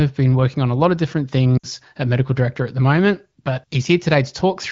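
From 1.57 to 1.66 s, lost AMR speech frames: about 60 ms, fitting three 20 ms frames, failed their checksum. The AMR-WB decoder repeats its last settings with falling gain, so the sound smears into near silence. A spectrogram shows frozen harmonic bands fading to a dark gap.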